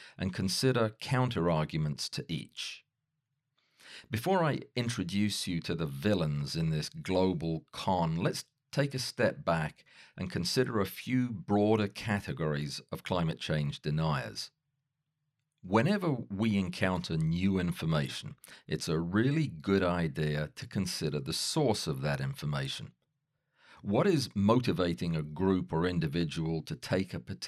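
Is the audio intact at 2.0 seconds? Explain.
Yes, the speech at 2.0 seconds plays through cleanly, with no dropout, click, distortion or other fault at that moment.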